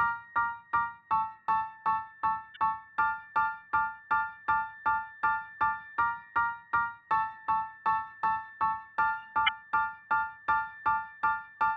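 Two short glitches stand out, at 2.54 to 2.57 s and again at 9.46 to 9.49 s, each a quick blip of roughly 30 ms. They're damaged data in a compressed stream: part of the encoded file got lost or scrambled, so the decoder misread the frames there, lost its place, and had to hunt for the next valid frame header before the audio picked up cleanly again.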